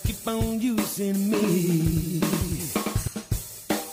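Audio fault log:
1.39–3.07 s, doubled audio track: a second, full-band copy of the sound runs about a tenth of a second behind the original and only around 5 dB quieter, giving a flammed, stuttering double image. It has no decay and no room colour, and it cuts in and out abruptly at both ends of the span, which separates it from an echo or reverb tail. The likely cause is a second capture through a slower path mixed back in.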